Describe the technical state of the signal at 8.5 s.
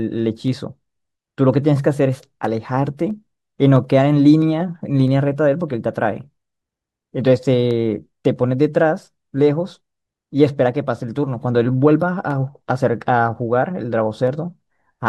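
At 8.5 s the signal sits inside a run of clock drift buffer slips lasting from 0.48 s to 14.93 s. The likely cause is two devices running on independent clocks that differ by something like 300 ppm, so the buffer between them creeps until a handful of samples, around seven, is dropped or repeated. In the speech this sounds like a regular click every 0.657 s, some twenty in all across the span.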